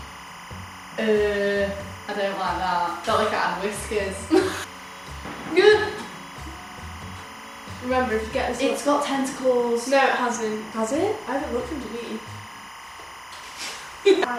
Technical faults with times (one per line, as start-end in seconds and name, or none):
0.00-14.38 timecode bleed